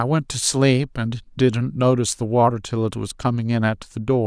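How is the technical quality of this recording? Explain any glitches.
The technical quality is sound, with no glitches to explain in this speech recording. Nothing in it calls for a fault to be described.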